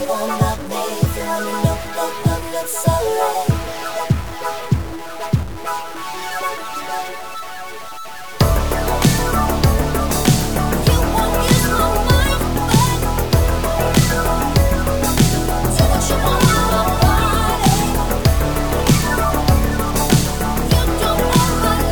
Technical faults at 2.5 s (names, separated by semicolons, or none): stuck bit